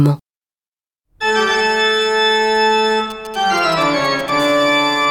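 A nearby 2G phone exchanging signalling bursts is picked up and rectified by the audio circuit, producing GSM signalling bursts from 3.10 to 4.30 s: galloping ticks and short 217 Hz buzzes about 20 dB below the sound. A nearby phone in a call, transmitting steadily 217 times a second, then gives GSM phone buzz from 4.40 to 5.05 s: a hard, raspy 217 Hz buzz with many harmonics, about 24 dB below the sound.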